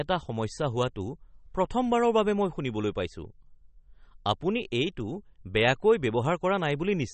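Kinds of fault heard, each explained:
MP3 compression: the speech sounds watery and swirly, with smeared consonant attacks, and nothing above 8.4 kHz survives, which fits a low bitrate around 32 kbps. A spectrogram would show a hard ceiling at 8.4 kHz and weak bands flickering on and off between frames.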